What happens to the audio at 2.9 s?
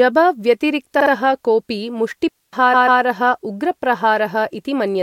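A stutter from repeated frames runs from 2.73 to 3.01 s. A 139 ms block of compressed audio, which fits a run of six frames, is decoded twice more. The same fragment restarts at each seam, stretching the speech by 279 ms.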